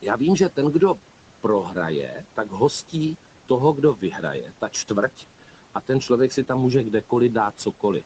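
Speech cut by the noise suppressor occurs from 4.45 to 4.9 s, just after "hostí toho kdo". The suppressor mistook quiet speech for background and pulled it down by up to about 9 dB, so roughly a tenth of a second sounds swallowed and faint.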